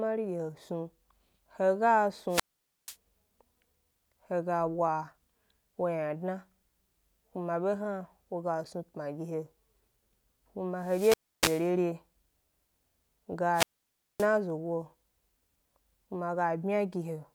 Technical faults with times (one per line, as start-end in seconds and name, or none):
2.28-2.96 wireless microphone squelch dropout
10.77-11.75 wireless microphone squelch dropout
13.52-14.28 wireless microphone squelch dropout